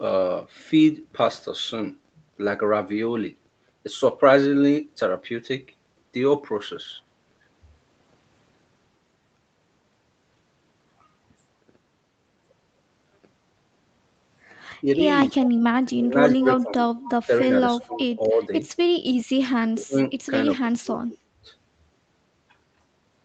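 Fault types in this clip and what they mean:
Speech suppressed in double talk: The speech dips hard in patches between 14.81 and 18.51 s (about two seconds in all, down by roughly 25 dB), then again at 19.58–20.11 s and 20.59–21.3 s (about 30 dB). This is likely an echo canceller ducking everything while both sides talk.
Echo leak: Short, faint repeats of the speech, about 15 dB down, come through at 15.43, 16.41 and 17.81–17.98 s, each trailing the original by 242 ms. This likely comes from a loudspeaker-side echo canceller letting bits of its mic pickup through.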